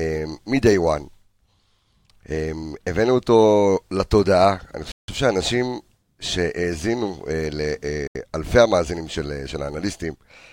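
Packets held up on a Bluetooth link likely starved the receiving buffer, causing two Bluetooth stalls in the speech: at 4.92 s playback halts for 165 ms, and at 8.07 s for 78 ms. Each time the sound cuts to silence, then resumes.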